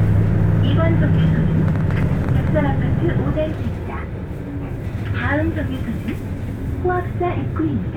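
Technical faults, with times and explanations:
1.68 to 2.48 s, train of clicks: for just under a second a burst of sharp, similar ticks sits on top of the sound, about ten of them at roughly 10 per second but unevenly spaced, each poking out about 5 dB above the surrounding audio. The likely cause is a brief repeated pulse leaking in from an external source, such as interference from nearby equipment or a faulty connection or power supply.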